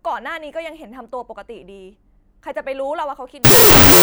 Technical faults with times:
3.45-4.02 wrong sample width

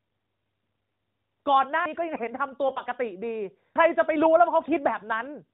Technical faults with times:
1.85 audio missing between chunks
2.68-2.82 AMR bit errors
3.75 audio missing between chunks
4.62-4.78 AMR bit errors

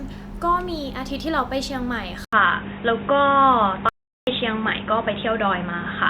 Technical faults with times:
2.25-6.09 input switched to a poorer device
3.89-4.27 audio dropout to silence

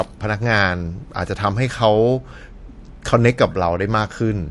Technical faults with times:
0.00-4.50 MP3 compression

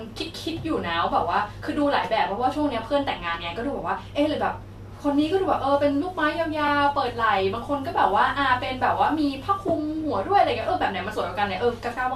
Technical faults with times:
6.67-6.69 repeated frames
8.66-8.69 repeated frames
10.61-10.64 repeated frames

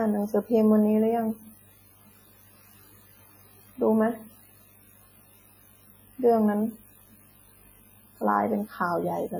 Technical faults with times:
0.00-9.39 WMA compression

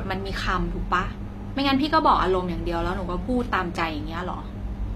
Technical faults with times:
0.00-4.95 HE-AAC compression

